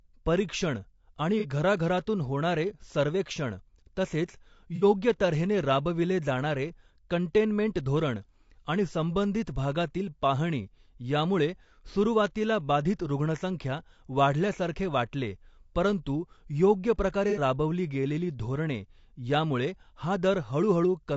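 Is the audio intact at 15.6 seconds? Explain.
No, at 15.6 seconds, as throughout, the speech sounds rough and grainy, likely from low-delay AAC compression whose short frames smear pitch harmonics at a low bitrate.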